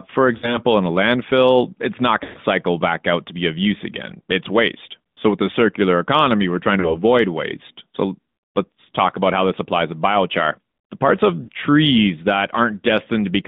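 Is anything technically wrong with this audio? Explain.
Yes. The speech has been through a narrowband mobile codec and has four dropouts.

AMR narrowband mobile codec, throughout. The audio only spans about 150 Hz to 3.7 kHz. Nothing sits above that. The codec rebuilds speech from a vocal tract model driven by a few pulses per subframe. The damage is plainly audible: the voice sounds thin, buzzy and synthetic. The quality fits a mid-rate mode near 10.2 kbps.

Lost AMR speech frames, at 0.38 to 0.59 s, 2.24 to 2.39 s, 6.80 to 6.99 s and 11.44 to 11.49 s. Corrupted frames were rejected. The decoder then repeated its last good settings at falling gain. Three events fit about 40 ms of missing audio and sound like a brief warble or dip. The one at 2.24 s fits about 120 ms. There the sound smears and fades before recovering weakly.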